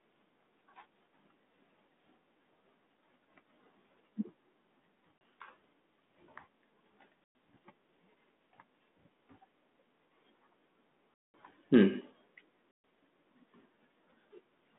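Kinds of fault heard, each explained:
Packet loss on an ADPCM call: the line drops to hard-edged dead silence four times, at 5.18 s (about 30 ms), 7.24 s (110 ms), 11.16 s (200 ms, the longest) and 12.71 s (130 ms). ADPCM sends only differences from a running prediction, so missing chunks leave the decoder's predictor and step size out of step with the sender's. After each hole the speech comes back slightly distorted, at times with a click or at the wrong level, then settles within a few tens of milliseconds.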